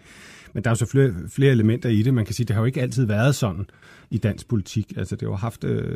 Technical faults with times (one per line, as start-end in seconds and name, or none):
none